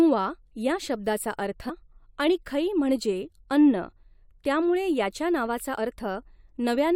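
Twice in this speech clip, damaged data in a compressed stream corrupts the frames reaching the decoder, so it misreads them, loses sync and must hunt for the next valid frame header before decoding resumes. The first break runs from 1.68 to 1.70 s and the second strikes at 5.77 s. Each is heard as a brief chirp or blip, a short burst of garbled sound that cuts abruptly across the speech.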